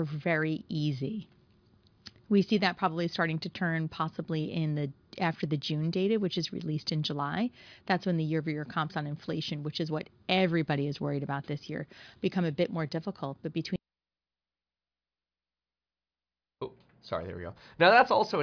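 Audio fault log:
No faults heard in this clip.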